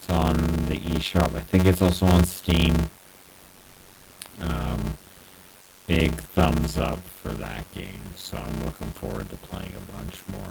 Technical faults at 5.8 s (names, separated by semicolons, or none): block size mismatch (padded); comfort noise in place of the background